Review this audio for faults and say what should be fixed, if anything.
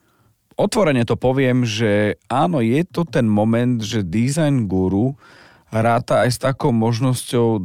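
A time-stretched section runs from 3.53 s to the end of the clip at 7.65 s, starting just after "áno je to ten". The likely cause is software slowing this part to 0.741 times its original speed to fill a set duration, keeping the pitch steady by repeating short slices of the waveform. The speech suddenly drags while its pitch stays the same. Fitting the timing by trimming or padding pauses instead of stretching the speech would prevent this.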